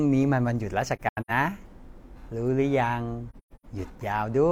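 From 0.96 to 1.31 s and again from 3.30 to 3.65 s, the speech drops into soft-edged holes. That's AAC frame loss with muting: lost frames are zeroed and fade out and back in.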